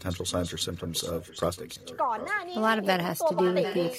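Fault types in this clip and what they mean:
echo leak: a copy of the speech returns 750 ms late, around 15 dB down, then nearer 10 dB down at the end, likely through an imperfect echo canceller; spectrograms show fainter duplicate harmonic patterns shifted right by that delay.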